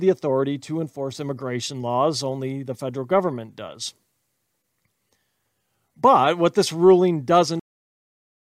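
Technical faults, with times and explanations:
7.60 to 8.46 s, cut-off end: the speech stops mid-sound and falls straight to digital silence with no decay, because the final buffers were never written or played.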